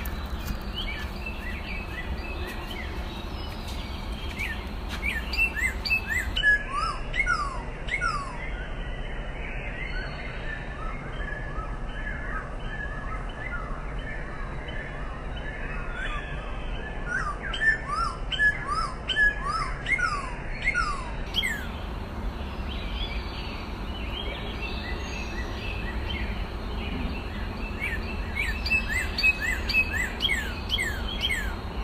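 From 6.37 s to 21.27 s a section at the wrong speed plays at about 0.66 times its proper rate, so everything turns slower and deeper together, dropping roughly seven semitones. The likely cause is the passage being fitted to the wrong clock during editing or playback. On a spectrogram, every harmonic band slides down and packs closer together while onsets stretch out sideways; the waveform shows transients spread wider apart until normal speed returns at 21.27 s.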